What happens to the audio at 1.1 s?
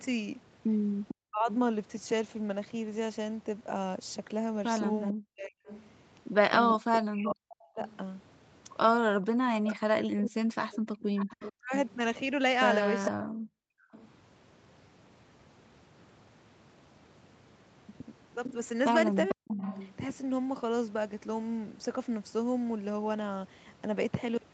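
Echo leak runs from 1.08 to 1.54 s: a second copy of the voice arrives about 0.45 s late, sitting roughly 10 dB below the main speech, so the talker seems to overlap with a quieter replay of themselves. This is likely a loudspeaker setup on one side whose echo canceller failed to strip out what its microphone picked back up, letting that delayed copy return down the line.

Speech suppressed in double talk overlaps it, from 1.12 to 1.48 s. The voice drops sharply, at its deepest by roughly 40 dB, with about 0.4 s affected in total. The likely cause is that both sides were talking at once and the echo canceller, unable to tell the local talker apart from the returning loudspeaker signal, attenuated everything together, swallowing real speech along with the echo.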